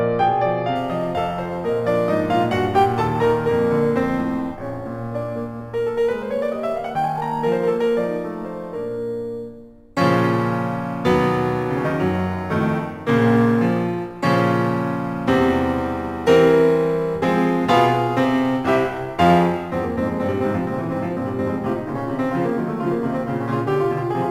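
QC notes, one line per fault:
0.76–24.30 s, crude rate conversion: samples appear to be repeated by nearest-neighbour picking with no filter, which fits a 44.1 kHz to 48 kHz change. The periodic timing error leaves an inharmonic, gritty fizz roughly 30 dB below the music, tracking loud and bright passages.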